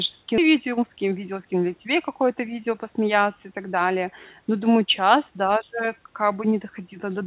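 At 0.38 to 0.40 s, a skip ahead: about 0.4 s of audio was dropped, so playback lurches forward with no gap and the two sides join abruptly. From 0.48 to 1.69 s, a jitter buffer speed-up: the overfull buffer trimmed short pitch-period pieces, about 150 ms in total, so the speech runs roughly 10% fast at unchanged pitch and sounds hurried. Throughout, the G.711 call codec limits everything to below 4 kHz.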